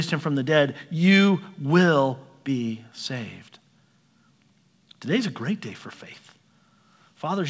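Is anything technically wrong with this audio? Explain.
No, nothing's wrong here; this is just speech that came over a call, and the way the top end stops at about 8 kHz fits a wideband codec like G.722 at 64 kbps doing its ordinary job.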